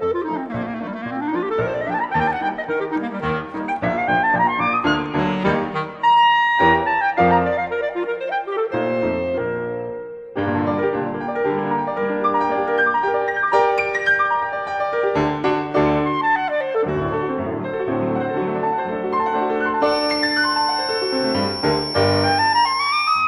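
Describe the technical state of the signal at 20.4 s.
A feedback whistle runs from 19.79 to 23.27 s: a thin 5.4 kHz tone, slowly swelling and fading, about 10 dB under the sound, likely a loudspeaker-to-microphone loop held at the feedback threshold.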